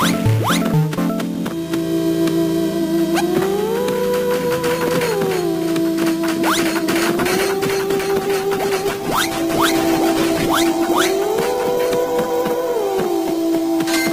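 At 7.16 s a call bitrate drop begins: the bandwidth estimate collapsed, and the encoder was forced onto far fewer bits, which fits a fall from 128 kbps to roughly 12 kbps. The audio turns coarse and muffled, with the top end cut away, staying at its worst for about 5.65 s and not recovering before the end.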